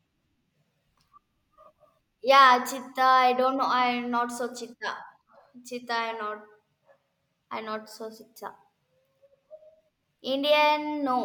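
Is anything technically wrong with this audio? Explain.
No, nothing stood out as technically wrong on listening to this speech recording.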